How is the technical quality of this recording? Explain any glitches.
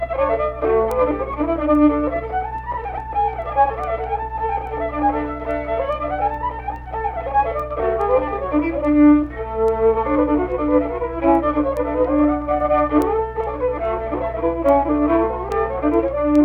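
The recording has a clock fault. Word clock ticks run from 0.50 s to 16.36 s, about forty in all, roughly every 0.4 s. The receiving device isn't locked to the sender's clock. Each slip drops or repeats a sample, causing a tick. The rate suggests the clocks differ by around 50 ppm.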